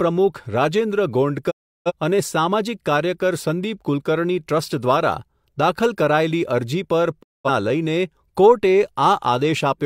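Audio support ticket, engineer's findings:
Digital broadcast dropout, 1.50–1.92 s and 7.21–7.50 s: speech fades out over about 20 ms, silence, then resumes mid-programme. Receiver muting on lost or checksum-failed frames; gaps of roughly 340 ms and 210 ms fit about eight and five frames. Missing content unrecoverable.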